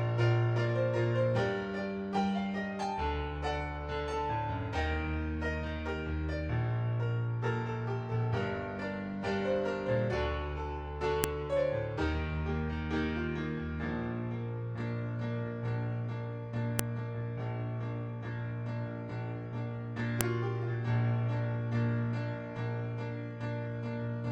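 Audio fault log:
11.24 s, 16.79 s and 20.21 s: file header played as audio. Each of these moments brings a sharp, loud click that cuts straight across the sound regardless of what it is doing. Separate WAV pieces have been joined end to end with their headers left in place, so the few dozen bytes of file metadata at the start of each new piece are read as sample values. The result is a very brief, loud burst of effectively random data.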